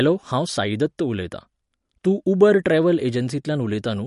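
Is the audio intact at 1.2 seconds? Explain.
No. MP3 compression runs through the whole clip, including 1.2 s: the speech sounds watery and stops at 11.2 kHz, likely from an encoder starved of bits, fitting about 48 kbps.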